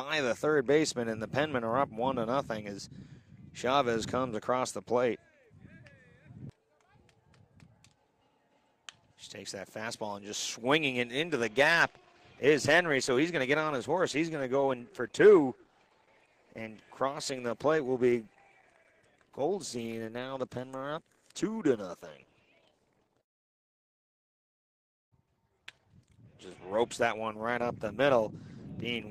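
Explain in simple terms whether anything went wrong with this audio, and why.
At 11.2 s the stream fell back to a lower-quality version, a fault known as an adaptive stream at a lower bitrate, and it stays there until the end. This happens when the connection slows and the player keeps going by fetching a more heavily compressed copy. The switch is abrupt but has no gap. From that point compression artefacts become more noticeable.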